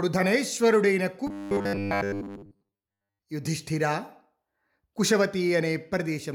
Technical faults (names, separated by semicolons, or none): robotic sound from repeated short buffers